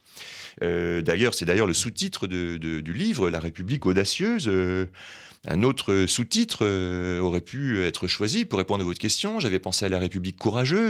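It's a speech clip with one short rough patch from about 8.77 to 8.83 s: a lost packet rebuilt from error correction. Around 40 ms, which fits two lost packets, gets played from the lower-bitrate backup copies, so there's no gap, just a briefly grainier, noisier stretch.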